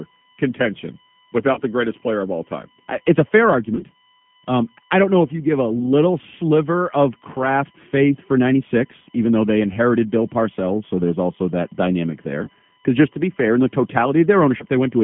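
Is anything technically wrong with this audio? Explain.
Yes. Throughout the speech there is USB whine: a steady 1 kHz tone with its strongest component at 3 kHz, faint at roughly 35 dB below the voice, from bus frame current leaking through power or ground.

The G.729 codec is also audible throughout. At 8 kbit/s the speech is rebuilt from a filter, a pitch predictor and sparse pulses, so the band stops near 3.4 kHz and the voice sounds rough and slightly synthetic.

VoIP packet loss concealed by the speech codec occurs six times: 1.53–1.62 s, 3.75–3.83 s after "a fair", 5.79–5.89 s between "if you give a" and "sliver of craft faith", 9.73–9.78 s, 12.45–12.50 s after "there's also that dynamic", and 14.58–14.65 s. The first event loses 40 ms and the others 20 ms each. The decoder extrapolates from its last pitch and filter state, producing a brief buzzy or noisy, fading smear, and the voice stays weak or distorted for a short while after audio resumes.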